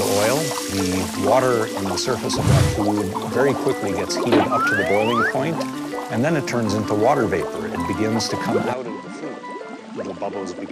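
At 8.73 s the sound abruptly dulls, losing everything above 9.3 kHz, drops roughly 10 dB and gains a fresh noise floor, likely an input switched to a poorer device rather than filtering.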